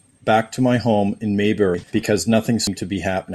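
Compressed frames skipped in this speech clip at 1.74 to 2.02 s and again at 2.67 s: the decoder never plays several whole frames, so the sound lurches forward by roughly half a second, then a fifth of a second.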